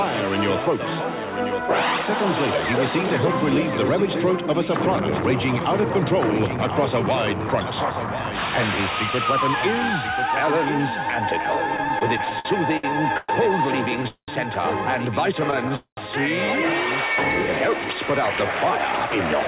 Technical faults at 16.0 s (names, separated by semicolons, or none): doubled audio track; call audio freeze